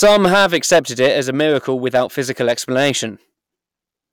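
Hard clipping runs through the whole clip: the speech is overdriven by about 8 dB, so roughly 3% of samples are flattened, adding crackle on the peaks.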